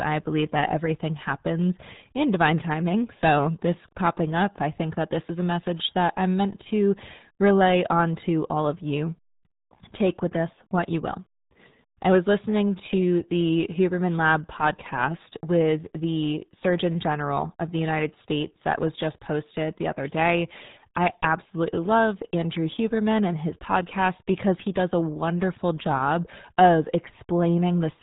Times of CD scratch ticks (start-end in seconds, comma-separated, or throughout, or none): none